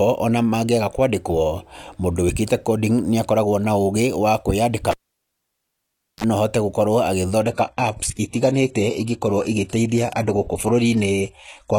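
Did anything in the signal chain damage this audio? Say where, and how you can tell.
Yes. Analogue wiring: a cable pulled and plugged in, 4.91 to 6.24 s. There's a pop, near silence, a 33 ms blip of 50 Hz buzz as the tip touched, then a pop before "no ahote".

Network side: at 7.42 s the adaptive stream drops to a lower bitrate until the end. Treble abruptly stops above 12.3 kHz with no gap, which points to a low-rate HE-AAC fallback.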